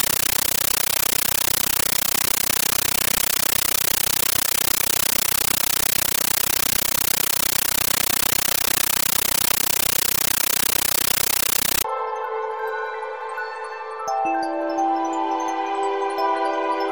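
From 0 to 11.84 s, a compressed stream played as audio: undecoded data, fitting an AC-3 stream, becomes chattering static of 13.3 ms noise bursts, 31.25 per second.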